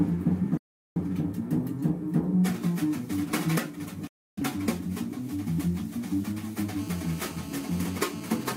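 The sound cuts almost instantly to silence from 0.57 to 1.01 s and again from 4.07 to 4.42 s. This is a digital broadcast dropout. The receiver lost good frames, about 0.38 s and 0.30 s worth, which fits roughly nine and seven lost frames. It muted with a 3 ms fade and lost the audio sent meanwhile.

From 6.79 to 8.52 s a hard, raspy buzz at 217 Hz, rich in harmonics, sits about 18 dB below the signal and holds steady. This is GSM phone buzz: a nearby phone in a call transmits in bursts 217 times a second, and the audio circuitry rectifies those pulses.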